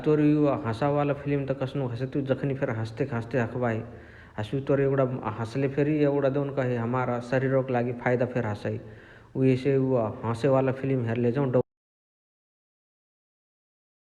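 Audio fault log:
11.61 s to the end: audio dropout to silence. The speech stops mid-flow and the rest is silent, with not even room tone left. The input was likely lost while writing continued. Unlike a fade or noise gate, nothing tapers or leaks through.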